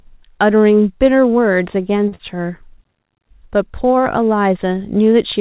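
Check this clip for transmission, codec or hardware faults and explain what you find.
Two network faults sit close together in the speech, both in the call's jitter buffer, with the band stopping at 4 kHz as a narrowband call path does.

From 2.08 to 2.14 s there is a short stall from a late packet: the buffer ran dry, so the receiver stretched the last sound for about 34 ms and resumed without losing anything, leaving one held, faintly buzzy sound.

From 2.15 to 2.22 s there is short concealed packet loss: about 40 ms never arrived, and the receiver extrapolated the preceding sound to cover the gap before blending back, which sounds like a brief smear.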